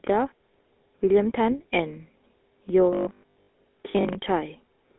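A speech recording passed through the GSM full-rate codec from start to finish. The codec rebuilds the voice from a vocal-tract model driven by sparse pulses, at a rate that fits 13 kbps over a 250 Hz to 3.4 kHz phone line. Nothing survives above 3.8 kHz, and the speech carries a plainly audible buzzy, gravelly roughness. From 2.93 to 4.15 s, new audio likely arrived too seldom, and playback filled the gaps by looping a 20 ms buffer, so most of the real audio in that stretch is skipped. The repeats force a rigid 50 Hz buzz onto the sound, producing robotic sound from repeated short buffers: a metallic tone that only loosely follows the speech.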